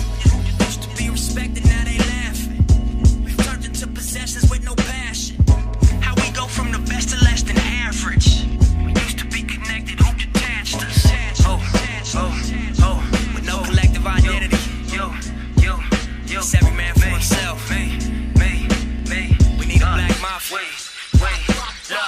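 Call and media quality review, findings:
Unreliable data bit, 5.83–7.75 s: steady fizzing crackle, persisting through pauses; identical-size spikes about −33 dBFS from one marginal data line, unlike signal-dependent clipping distortion.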